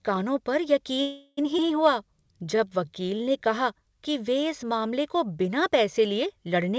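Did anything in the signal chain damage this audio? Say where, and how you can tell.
Yes. Just after "कानों पर", from 1.02 to 1.39 s, the speech stops and the last sound is stretched into a fading buzz lasting about 0.35 s. When it resumes, it picks up exactly where it left off with nothing lost. That is a call audio freeze in the network and jitter buffer stage, likely caused by packets arriving late while the buffer ran dry. Unlike a dropout, the gap is filled with synthetic continuation rather than silence, and unlike a skip, no speech is removed.

At 1.57 to 1.60 s there is a skip ahead, also at the jitter buffer stage. Playback jumps forward with almost no join, only a few milliseconds of bridging, and roughly a fifth of a second of speech simply disappears. This looks like the buffer discarding audio when it overflowed. It differs from the freeze because the material on either side does not run on; the second side starts later in the speech than the first side ended.

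From 1.95 to 3.41 s, the jitter buffer slow-down plays the speech at about 88% speed while the pitch stays the same. Sounds are drawn out, adding 178 ms in total. The receiver repeated single pitch periods to rebuild its reserve. A tape-style slowdown would lower the pitch as well, so the unchanged pitch points to the buffer and not the playback clock. Throughout the clip the band ends at 8 kHz, which fits the G.722 call codec on this path.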